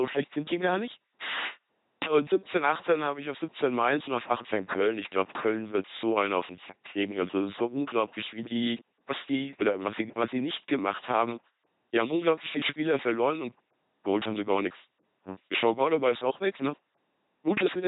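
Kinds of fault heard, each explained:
LPC-10 vocoder, throughout: the speech is rebuilt from a short all-pole vocal tract filter driven by either a buzzy pulse train or noise, never a mix, giving a heavily damaged, mechanical robot voice with nothing above 3.8 kHz, which fits a 2.4 kbit/s military vocoder.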